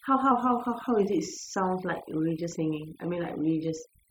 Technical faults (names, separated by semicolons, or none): overdone noise removal; drift correction step